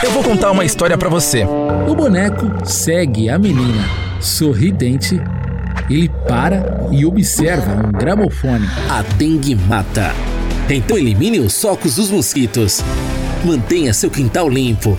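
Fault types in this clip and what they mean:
Dropped buffer (overrun): You hear three abrupt jumps where the audio lurches forward with no gap, at 9.72, 10.92 and 12.36 s. The second jump skips noticeably more, just under a tenth of a second, while the other two lose only a few hundredths. The likely cause is the recording side not collecting its samples in time, so a chunk got overwritten and the two ends were spliced straight together.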